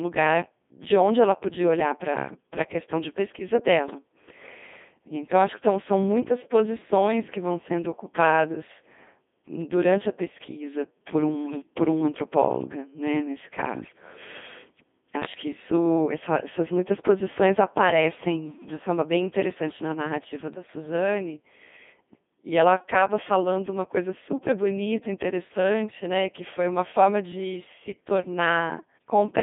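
A very low-rate Codec 2 vocoder carries the speech for the whole clip, at 2.4 kbit/s and limited to a 200 Hz to 3.6 kHz band. The decoder keeps no real waveform. It rebuilds the voice from sine waves driven by pitch, voicing, energy and a coarse spectral envelope, so the heavy damage comes through as a robotic, buzzy, synthetic tone with a thin, band-limited colour.

Bit errors on the digital voice radio hit twice, corrupting the frame parameters the vocoder depends on. From 11.45 to 11.62 s, just after "durante a pesquisa por" and before "por um antropóloga né", a bit error rate of roughly 5 percent scrambles what sounds like several consecutive frames. The result is sudden jumps in pitch and level and a warbling, bleeping burst of gibberish. At 20.54 to 20.68 s, right after "bem interessante na narrativa", errors at around 1 percent cause a shorter, milder glitch in pitch and tone colour.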